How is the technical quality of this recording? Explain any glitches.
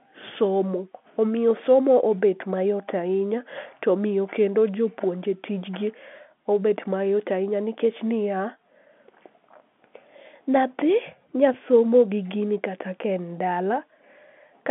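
No glitches turn up anywhere here, just the ordinary sound of a telephone line, with the speech sitting in roughly the 200 Hz to 3.5 kHz band that G.711 telephone coding gives and nothing much above 3.8 kHz.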